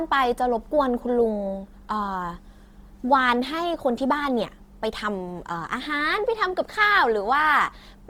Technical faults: Opus compression

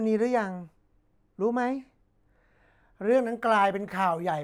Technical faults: de-emphasis applied wrongly

